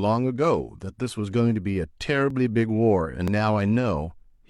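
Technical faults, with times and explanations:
1.30–1.33, 2.30–2.35 and 3.28–3.31 s: overlap between stream segments. Overlapping one-second segments get trimmed, deleting 25–43 ms of speech; each shows as a sudden waveform discontinuity and a vertical spectrogram line, heard as a tiny skip.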